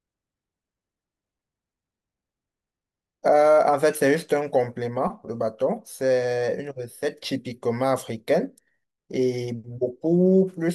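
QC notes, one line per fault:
No audible faults found on the speech track; nothing to log.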